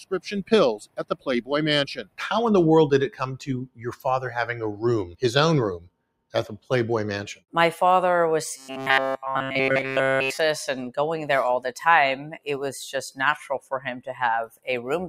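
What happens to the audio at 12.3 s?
At 12.3 s you're inside a stretch from 12.23 to 12.47 s where the sound gets cut by the noise suppressor. It mistakes that passage for noise and pulls it down by about 20 dB at the deepest point, so it sinks in level.

That dip sits on top of a broader problem: a noise suppressor applied to music or sounds runs through the whole clip. Steady material and decays keep getting treated as noise, so the level swings by around 10 dB and the sound pumps and thins as the suppressor clamps down and lets go.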